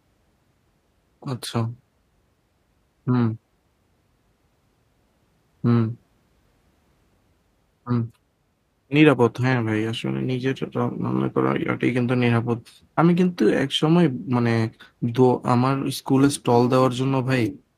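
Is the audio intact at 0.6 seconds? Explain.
Yes, at 0.6 seconds the speech plays through intact, with no dropout, click, distortion or other fault at that moment.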